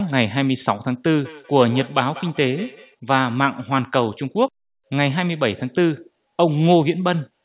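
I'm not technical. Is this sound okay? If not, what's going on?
No. From about 1.24 to 2.96 seconds there is a feedback echo between two devices. Two devices in the same room are on the call, so one device's loudspeaker plays the speech back into the other's microphone, and neither echo canceller removes it. The speech comes round again roughly every fifth of a second, each repeat quieter than the original, thinner and more ringing. The narrow, telephone-like sound of the call line is also audible.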